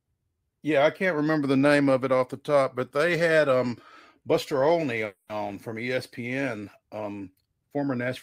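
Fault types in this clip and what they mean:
call audio freeze: Around 5.05 to 5.39 s the speech stalls, and the last sound is held over as a fading buzzy hiss for about 240 ms rather than dropping to silence. It then picks up exactly where it stopped, so nothing is lost, but everything after runs about 240 ms late. That points to packets likely being held up in transit, leaving the jitter buffer empty while the receiver filled the gap.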